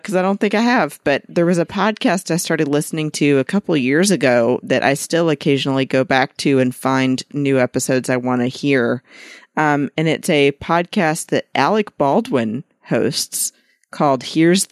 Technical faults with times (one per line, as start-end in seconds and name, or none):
none